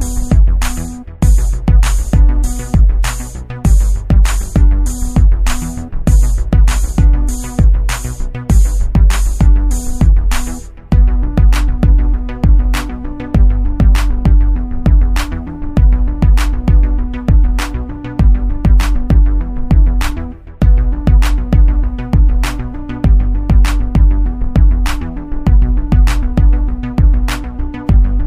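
No technical faults are audible.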